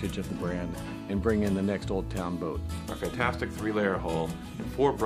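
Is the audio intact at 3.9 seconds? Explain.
Yes, at 3.9 seconds the audio runs on without any dropout, glitch, distortion or other fault.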